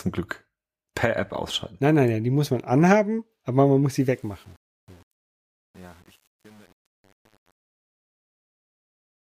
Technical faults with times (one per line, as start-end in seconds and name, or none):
3.92-9.26 truncation distortion on a fade